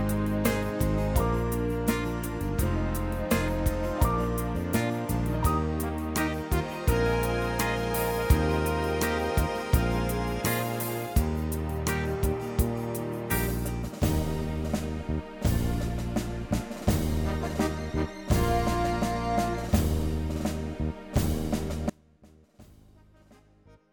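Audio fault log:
21.9–23.9 s: audio dropout to a faint residue. The sound cuts out abruptly and stays down to the end, leaving only a faint sound roughly 25 dB below its normal level, not a pause or fade; likely the wanted signal was lost while the path after the break stayed live.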